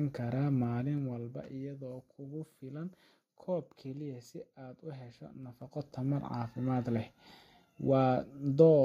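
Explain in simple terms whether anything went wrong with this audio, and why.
Zipper noise appears from 0.56 to 1.58 s as the level drops, and from 5.39 to 5.94 s as it rises. The volume moves in small jumps several times a second, and each jump leaves a faint tick, so the speech sounds like it is zipping.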